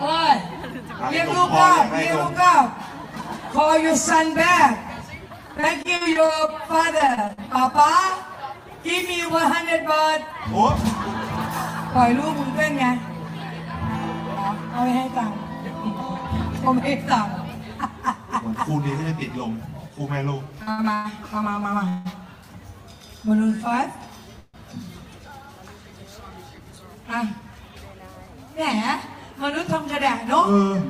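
The audio has four kinds of network fault. From 5.57 to 7.53 s, packets were lost over and over, causing repeated packet loss with a robotic sound. The receiver patched 15 separate holes by continuing the last bit of sound, the longest lasting 44 ms, so about 17 percent of that stretch is filled-in audio. Because 240 ms of the original never arrived, this section sounds choppy, with pieces missing.

Between 19.89 and 22.07 s, packets arrived late rather than being lost, so the jitter buffer ran dry five times. Each time, the receiver stretched the last sound until data resumed, the longest wait being 166 ms and 383 ms in all. Nothing is missing, but these repeated stalls make the sound drag and stutter.

At 24.39 s there is a 148 ms call audio freeze. A smeared, continued tail of the preceding sound fades into about 20 ms of silence before the audio carries on from where it stopped, now 148 ms later than before. 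The likely cause is packets being held up in transit and emptying the buffer.

The buffer later held more than it needed, so the receiver trimmed short pitch-period slices to catch up. This jitter buffer speed-up runs from 26.49 to 27.70 s at about 107 percent speed, removing roughly a tenth of a second, and again from 30.25 to 30.78 s at about 109 percent, removing roughly a twentieth. Pitch stays the same, but the sound comes across as hurried.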